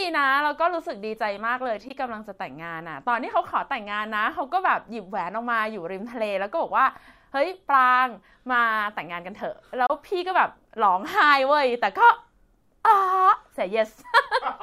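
Two brief holes cut into the speech at 1.88 to 1.91 s and 9.86 to 9.90 s, the second longer. These are likely Bluetooth dropouts: late packets were discarded, losing about 13 ms and 27 ms, which fits one and then two packets. Unlike a stall, the speech resumes further along, as if it had kept playing.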